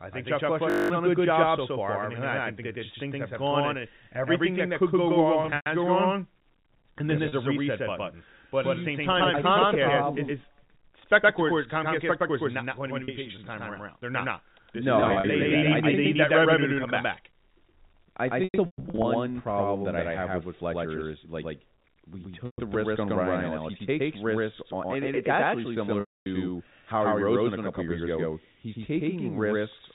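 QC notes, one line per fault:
Throughout: doubled audio track. A second full-band copy of the speech runs roughly 100 ms behind the original at about the same level, giving a flat slapback with no decay or room colour. A full-level copy at a fixed lag with no reverberant tail most likely means the signal was captured a second time through a slower path, or two unaligned copies were summed in an edit.
0.7 to 0.9 s: system hang loop. A 20 ms slice of audio repeats exactly ten times, so for that fifth of a second the speech is replaced by a steady 50 Hz buzz, and roughly 200 ms of real audio is missing. This is the sound hardware cycling through the same short ring buffer while the host or driver stalls, which fits a buffer of about 20 ms.
5.42 to 26.26 s: packet loss with pitch repetition, seven events, at 5.42, 7.28, 13.04, 15.0, 18.44, 22.46 and 26.0 s. The short single losses are 40 ms each, at 7.28 s between "this yep" and "a reset button" and at 13.04 s between "going to be" and "this time around", and they sound like a briefly held, buzzy note. 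Scattered losses at 5.42 s (160 ms lost over 240 ms), 15.0 s (100 ms over 240 ms) and 18.44 s (360 ms over 600 ms, longest gap 120 ms) give a choppy, repeatedly frozen quality. The 120 ms gap at 22.46 s between "is like we" and "the risk on" and the 260 ms gap at 26.0 s last long enough for the repeated pitch period to fade towards silence before the speech cross-fades back in. In each case the receiver is concealing missing packets by replaying the last pitch cycle. The G.711 A-law telephone band holds the speech under 4 kHz, and its coding noise is faint.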